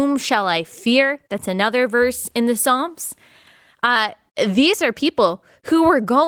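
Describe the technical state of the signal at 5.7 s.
At 5.7 s the speech is intact, with no fault at that moment; it passes through Opus voice compression running in hybrid mode at 20 kbps, which leaves only light coding colour.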